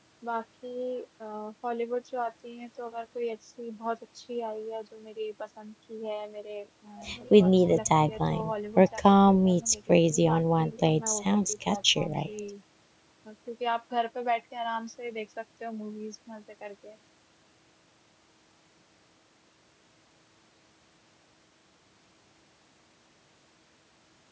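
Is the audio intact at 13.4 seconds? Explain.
Yes, the speech is intact at 13.4 seconds, with only the ordinary call microphone processing shaping it, which trims the deepest bass and leaves nothing above 8 kHz.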